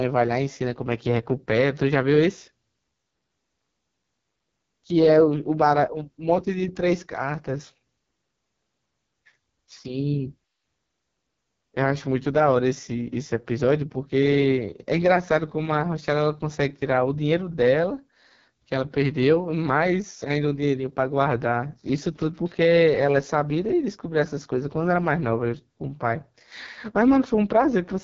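Throughout, heavy AMR wideband (HD Voice) codec damage leaves the speech rough and raspy, fitting a 6.6 kbit/s mode. A spectrogram shows smeared harmonics and nothing above 7.4 kHz.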